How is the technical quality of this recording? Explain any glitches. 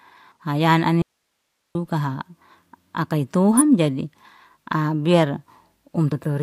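The recording has three technical faults: two short bursts of corrupted data and one dropout.

At 0.32–0.37 s and again at 3.56–3.62 s, damaged data in the compressed stream makes the decoder lose sync.

From 1.02 to 1.75 s, an audio dropout to a faint residue cuts the speech abruptly for about 0.73 s. Only hiss remains, roughly 55 dB down. This is likely a lost signal upstream of a path that stayed live, and its hard edges rule out a pause or fade.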